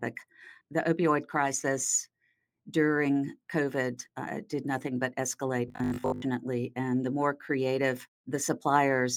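From 5.68 to 6.22 s the sound becomes a rigid, metallic buzz with a fixed pitch of 50 Hz. This is robotic sound from repeated short buffers. Fresh audio likely arrived too seldom, so a 20 ms slice was replayed for most of that stretch.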